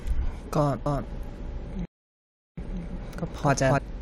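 A speech recording in which, from 0.86 s to 3.78 s, every sound is followed by a second, equally loud copy trailing about 300 ms behind. The copy is full-band and dry, with none of the decay or room colour a real echo would carry, and it switches on and off abruptly at those two points. This is a doubled audio track, most likely the same signal mixed in twice through a second, slower capture path that runs a fixed distance behind the first. Within that stretch, at 1.85 s, the sound cuts off in mid-flow and the output stays completely silent until 2.58 s, a gap of 0.72 s. The speech then resumes. That silence is a playback stall, likely the player running out of buffered data or its audio thread being blocked, so nothing reached the output until it recovered.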